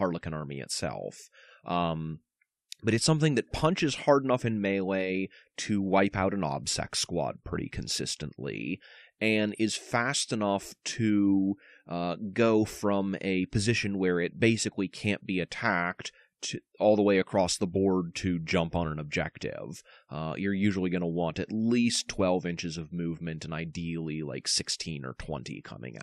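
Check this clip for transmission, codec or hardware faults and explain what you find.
Nothing in the speech recording points to a fault in the transmission path, the encoding or the equipment that captured it.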